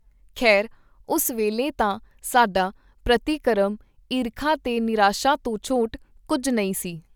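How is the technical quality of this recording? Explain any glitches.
The recording shows no technical glitches; the speech signal comes through continuous and intact.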